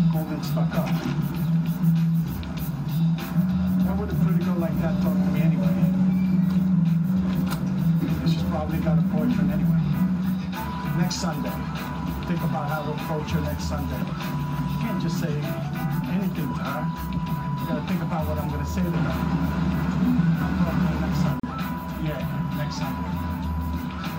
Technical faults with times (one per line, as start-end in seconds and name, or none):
21.40-21.43 gap at a join of encoded pieces